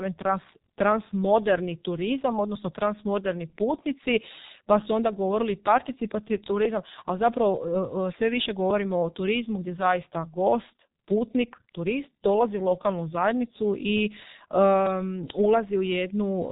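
Throughout the speech, the sound carries heavy G.723.1 codec damage. Nothing reaches above about 3.8 kHz, so the top end is simply gone and the speech sounds muffled. The codec chops the signal into 30 ms frames and rebuilds each from a coarse voice model that updates slowly. That leaves a hoarse texture. Consonants smear into one another. The heavy degradation fits the codec's 6.3 kbit/s mode.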